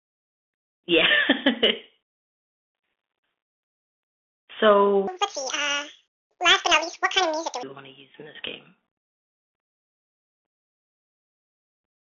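Across the whole clip the speech carries the Bluetooth CVSD headset codec. The line band runs from about 300 Hz to 3.6 kHz, so nothing above roughly 4 kHz survives, and the damage is plainly audible. CVSD encodes each sample as a single up-or-down bit with an adapting step size, and the sound fits a 64 kbps CVSD link. Fast, loud high-frequency movement outruns the step, so sibilants turn scratchy and a granular hiss sits beneath the speech.

From 5.07 s to 7.63 s there is a section at the wrong speed. The audio plays 1.88 times faster than it was recorded, and because speed and pitch move together, the voice jumps up by about ten semitones and sounds hurried and chipmunk-like for those two and a half seconds before dropping back to normal. The likely cause is that this stretch was played or edited against the wrong clock.

At 11.84 s there is unconcealed Bluetooth headset packet loss. About 7.5 ms of audio, consistent with a single lost packet between headset and phone, is replaced by silence or an idle pattern with no attempt to mask the gap. 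The result is a brief, abrupt-edged hole in the speech, heard as a momentary dropout. On this CVSD link the signal comes back quieter for an instant after the gap.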